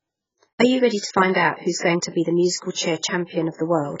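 The whole speech clip is band-limited, with nothing above 7.6 kHz. It sounds dull, smeared and fizzy on sibilants. This is likely heavy AAC compression, with damage that fits AAC-LC at a very low bitrate, around 12 kbps.

Pre-echo appears three times. A short hiss runs ahead of sharp attacks, which sound blunted. It spans 1.77 to 1.82 s, after "to find out who's" and before "going to be the". It recurs from 2.71 to 2.77 s, after "to be the musical", and from 3.56 to 3.59 s. The codec spread its quantisation noise across each block, into the quiet gap before each attack, for 46, 58 and 31 ms.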